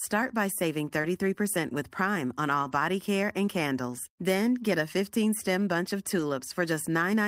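A speech recording of about 7 seconds with two network-related faults. At 1.01 to 1.05 s there is short concealed packet loss: about 20 ms of audio did not arrive in time, and the receiver covered the hole by extending the preceding sound, from its pitch if voiced and as shaped noise if not, before blending back into the real signal. The result is a brief smear or wobble rather than a silent dropout. Overlapping the end of that stretch, at 1.03 to 1.05 s, is a lost packet rebuilt from error correction: roughly 20 ms, consistent with one packet, was replaced by the low-bitrate duplicate carried in the following packet, so there is no gap but that fragment sounds coarser and noisier. The same repair occurs again at 2.63 to 2.73 s, where about 60 ms of rebuilt audio points to three separately lost packets recovered from redundant copies, each giving a short rough, grainy patch.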